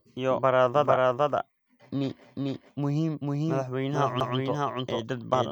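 A doubled audio track runs through the whole clip: the speech is heard twice, with a second full-band copy trailing the first by roughly 0.4 s and at about the same loudness. The copy has no reverberant tail or room colouring, so it sounds like a clean, overlapping repeat rather than an echo. The likely cause is the signal being captured again through a slower path, or an edit that left two copies out of step.

A CD skip occurs at 4.2 s. A jolt or a flaw on the disc made the laser jump to a different turn of the spiral, so the player muted very briefly, for only a few milliseconds, and resumed from another point in the recording. It is heard as a small tick followed by a sudden discontinuity, with the speech jumping abruptly instead of continuing where it left off.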